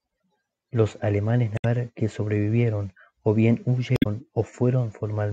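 Damaged data in a compressed stream breaks into the speech twice, from 1.55 to 1.65 s and again from 3.94 to 4.06 s. Each time a stretch of the encoded stream has been corrupted, so the decoder misreads those frames, loses its place and hunts for the next valid frame header before it can resume. The result is a brief chirp, squawk, click or short hole of about a tenth of a second in place of the speech.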